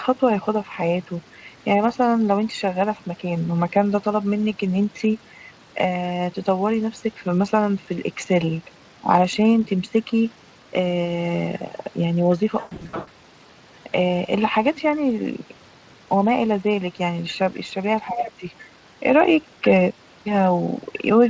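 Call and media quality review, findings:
VoIP packet loss concealed by the speech codec, 12.59 to 13.09 s. About 360 ms of audio missing, scattered over 480 ms, longest gap 120 ms. The decoder extrapolates its last pitch and filter, giving buzzy, fading fill that stays weak after packets resume.

Speech suppressed in double talk, 18.07 to 18.45 s. Near-end level dips by up to roughly 15 dB across about 400 ms. The echo canceller, likely confused by simultaneous far-end audio, attenuates everything instead of only the echo.

Other side's voice leaking through, 18.16 to 18.32 s. A second voice is audible, roughly 5 dB below the talker. The talker's loudspeaker playback of the far end, likely not fully cancelled, reaches the microphone and passes into the send path during double talk.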